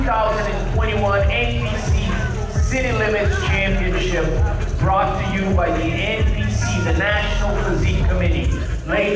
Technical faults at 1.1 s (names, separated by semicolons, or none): none